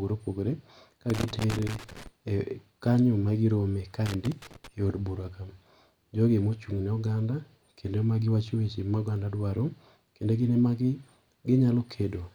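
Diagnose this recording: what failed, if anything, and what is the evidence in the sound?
Loose connector crackle at 1.10–2.07 s and 4.06–4.68 s, after "kanyo magi rome ka": a worn or dirty analogue-wiring contact makes and breaks, chopping the speech.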